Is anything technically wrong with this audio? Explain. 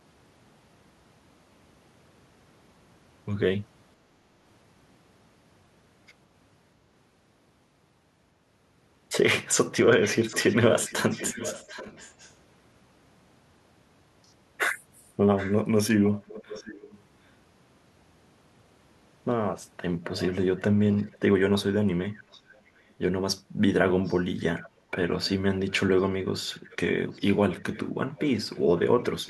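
Yes. Echo leak appears at 10.03–12.33 s, 15.37–17.01 s, 20.05–21.18 s, 22.02–22.93 s, 24.03–24.69 s, 25.24–25.71 s and from 26.42 s to the end. A delayed copy of the speech trails it by a constant 734 ms, starting about 15 dB below the speech and fading to about 25 dB below. This is likely a far-end loudspeaker whose echo canceller let part of its microphone pickup return. Unlike room reverberation, it is a distinct repeat at a fixed lag, not a smeared tail.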